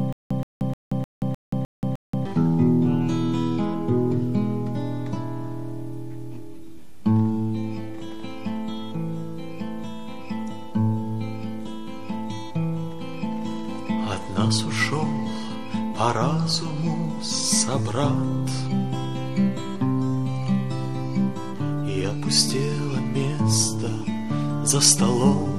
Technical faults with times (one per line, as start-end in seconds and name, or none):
0.00-2.25 stutter with silent gaps